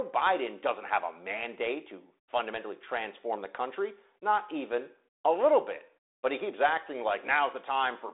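No faults can be heard in the speech, which carries the narrow telephone character of G.726 ADPCM at 32 kbit/s: a band from about 300 Hz to 3.7 kHz, nothing above 3.8 kHz, and only light coding roughness.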